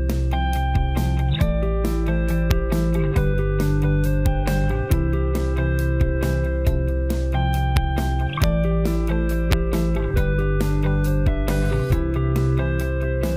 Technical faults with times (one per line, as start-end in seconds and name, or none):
2.51 integer overflow
4.26 integer overflow
4.92 integer overflow
7.77 integer overflow
8.44 integer overflow
9.52 integer overflow